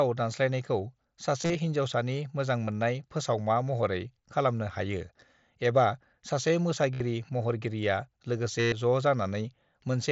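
Around 1.41 to 1.55 s, then 2.65 to 2.68 s just before "फोसावमा महरै", 6.94 to 7.00 s right after "एबा सासे", and 8.60 to 8.72 s, there's concealed Bluetooth headset packet loss over the mSBC link. Packets dropped between headset and phone, and the receiver patched the gaps by repeating the closest-matching recent waveform. The longer stretches, especially 8.60 s, turn into a held, buzzy tone that warbles as real audio returns.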